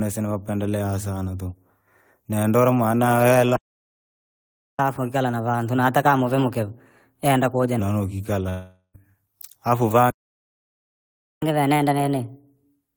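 At 3.56 s the speech stops dead for about 1.23 s, until 4.79 s. This is a playback stall, likely a starved or blocked player. From 4.79 to 7.79 s comes catch-up at higher speed. The player runs 1.15 times fast, and the pitch rises about two semitones before settling. At 8.49 s a long network dropout begins. A fading buzz or hiss covers the gap, then briefly silence. Speech returns at 8.96 s with about 0.44 s lost. A second stall silences the audio from 10.10 to 11.42 s. Catch-up then runs to the end at 1.25 times speed, roughly four semitones sharp.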